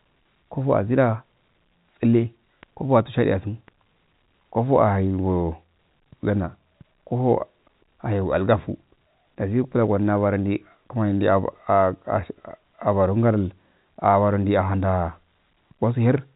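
Nothing goes wrong anywhere in the recording, which simply carries the familiar narrow, telephone-line character that comes with G.711 coding.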